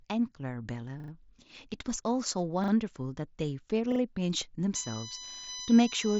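At 1.0 s a repeated buffer occurs. A short piece of speech, about 40 ms long, plays three extra times with hard joins. The device ran out of fresh audio and replayed the last chunk, which fits a 40 ms buffer. It is heard as a brief stutter. Nothing seems to be skipped. The same stutter returns at 2.64 s and 3.92 s, each time with two extra plays. From 4.75 s to the end, a USB whine sits under the speech. It is a fixed-pitch tone built on 1 kHz, strongest at 6 kHz, and fairly loud at about 10 dB below the speech. Current drawn by the USB bus in 1 ms frames is leaking into the audio. That whine is also heard through the last repeated buffer, at 5.32 s, which plays twice more. Through the Bluetooth mSBC headset path, the speech has nothing above about 7.7 kHz.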